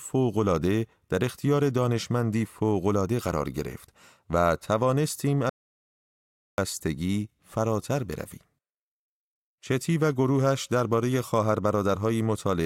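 An audio dropout to silence runs from 5.49 s to 6.58 s in this speech recording, removing about 1.09 s of material. The speech cuts off abruptly and resumes just as suddenly, and in between there is pure silence with no room tone or noise floor at all. That pattern points to the input signal vanishing while the recorder kept writing silence, likely from a momentary disconnection, a failed link or an accidental mute.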